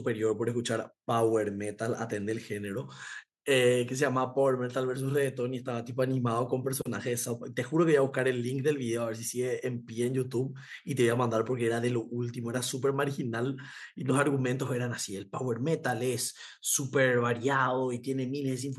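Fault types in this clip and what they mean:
Nothing stood out on listening to this recording.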